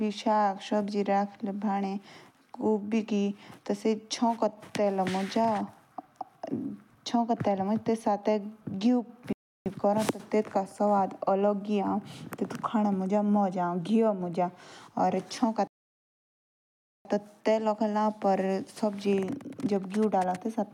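The player twice ran out of downloaded audio and halted until more arrived, a rebuffering stall: the speech drops to silence at 9.33 to 9.66 s (0.33 s added) and 15.67 to 17.05 s (1.38 s added), then resumes exactly where it stopped, nothing lost.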